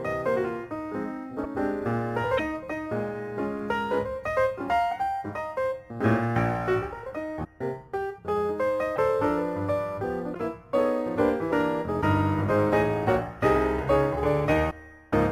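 At 1.43, 2.37, 7.43, 8.95, 10.33, 12.01 and 14.70 s, the audio skips forward with a 30 ms glitch each time, which fits a 26.1 ms MP3 frame. The likely cause is a broken MP3 bit reservoir: missing frames leave the following frame decoding from the wrong bytes.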